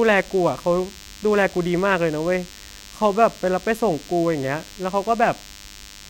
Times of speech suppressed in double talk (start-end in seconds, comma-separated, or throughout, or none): none